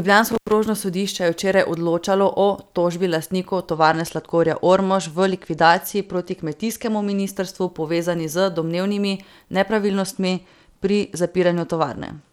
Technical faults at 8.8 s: none

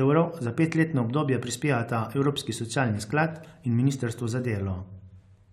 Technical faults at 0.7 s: none

